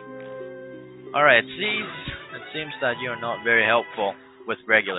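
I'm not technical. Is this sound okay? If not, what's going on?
Yes, nothing stood out as wrong when listening to this sound.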